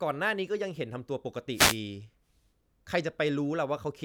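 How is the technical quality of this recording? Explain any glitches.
A wireless microphone noise hit marks the recording from 1.53 to 1.78 s. The analogue FM radio link faded as reflected signals cancelled, letting receiver noise surge up in a quarter-second swish of static.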